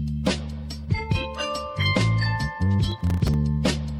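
From 2.91 to 3.34 s there is a burst of processor overload crackle. The processor repeatedly failed to deliver its short buffers in time. Around twenty brief silent gaps, each consistent with a buffer of roughly 3 ms, chop the sound into a gritty tearing.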